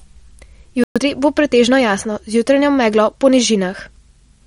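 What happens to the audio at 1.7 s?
At 1.7 s, as throughout, the speech sounds watery: likely MP3 compression at a low bitrate, zeroing weak frequency lines.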